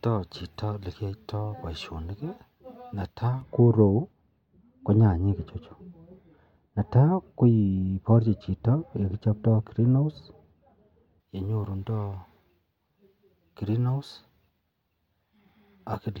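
From 3.41 s to 11.20 s the speech turns dull and muffled, the mark of de-emphasis applied wrongly: a treble-cutting curve meant to reverse pre-emphasis has been applied where none existed, or a second time. The top end rolls off smoothly, sitting about 11 dB down at 10 kHz relative to 1 kHz. On a spectrogram the upper bands darken evenly across that stretch, with no sharp edge, and the waveform looks rounder.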